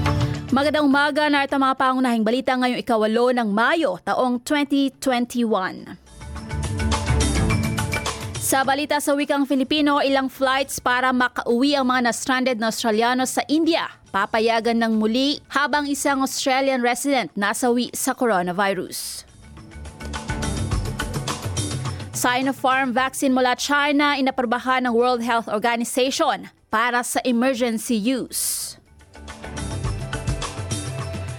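Nothing here trips up the ear at any point; the audio just runs along steadily with no technical faults to point out.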